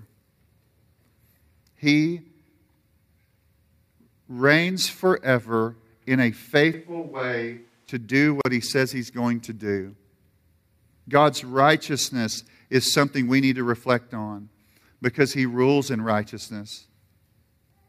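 Speech, with two faults. From 6.74 to 7.89 s, right after "reigns forever in a", there is a switch to a distant microphone: the sound turns hollow and roomy, drops about 10 dB with thinner bass, and a faint room-noise floor appears. The waveform shrinks abruptly, and the spectrogram loses low-end energy while reverb tails smear between syllables. The likely cause is the close microphone dropping out. At 8.41 to 8.45 s, just before "he says he's going", a 40 ms gap at a join of encoded pieces cuts the sound. Each separately encoded piece kept its start delay and end padding. The waveform shows a flat-line notch with slightly softened edges, and the spectrogram shows a thin vertical blank stripe before the speech resumes where it left off.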